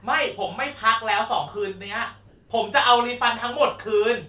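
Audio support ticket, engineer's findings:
Comfort noise in place of the background, 2.28–2.50 s (220 ms). Detailed background, about 32 dB below loud parts, turns steady and featureless, about 3 dB quieter. Likely DTX: sender's voice detector pauses transmission, receiver synthesises shaped noise. Nothing above 4 kHz, fitting a G.711 call path.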